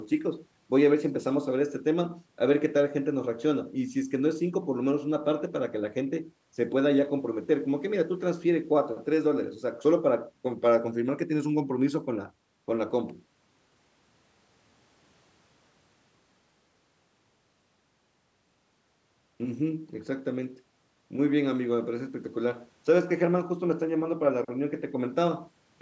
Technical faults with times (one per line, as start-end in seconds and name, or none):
none